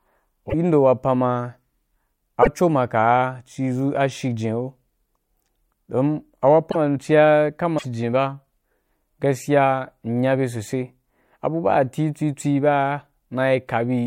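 At 0.49, 2.42 (just before "maka’a ci"), 6.70 (just before "ci ya") and 7.77 s (right after "ci ya"), the speech skips ahead through a 60 to 80 ms disturbed patch, two or three 26.1 ms frames, likely a broken MP3 bit reservoir.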